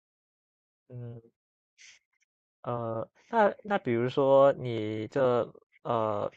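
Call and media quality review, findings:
No findings for call and media quality review.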